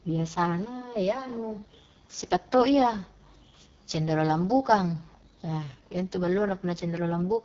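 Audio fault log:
throughout: AMR wideband (HD Voice) codec, heavy damage. The speech sounds rough and raspy. It stops at 7 kHz, with a hissy top band, which fits AMR-WB's lowest 6.6 kbit/s mode. Narrowband phone coding would instead cut off near 3.4 kHz.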